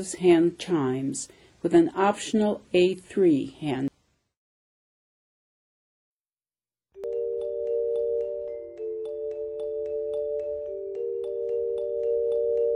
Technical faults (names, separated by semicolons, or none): damaged data in a compressed stream